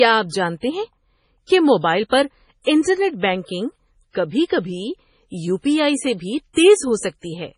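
From start to finish the speech carries heavy codec damage, most likely from MP3 compression at a low bitrate, around 24 kbps. With so few bits, the encoder drops the weaker frequency lines, and they flicker on and off from frame to frame. That gives a watery, swirling texture, metallic chirps on s sounds and smeared attacks. A spectrogram shows a hard ceiling at 10.5 kHz with nothing above it, and patchy, blinking holes in the quieter parts of the spectrum below.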